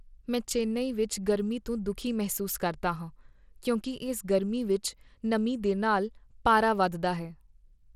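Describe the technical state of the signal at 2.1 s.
At 2.1 s you're hearing what's likely Bluetooth SBC compression, present throughout: a starved bit pool, around 96 kbps, roughens the speech and cuts everything above 17.3 kHz.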